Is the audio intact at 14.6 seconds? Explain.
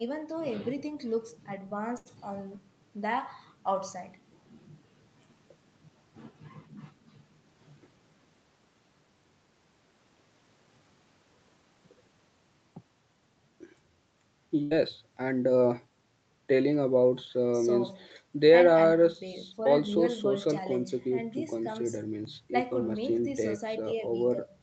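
No. A burst of packet loss runs from 14.63 to 14.73 s. Several consecutive packets failed to arrive in time, so the receiver's concealment stretched the last received stretch of speech across about 76 ms, lowering its level as the gap continued. It sounds like a brief held, fading tone or hiss rather than silence. Playback then picks up further along, so about 80 ms of the original speech is simply missing.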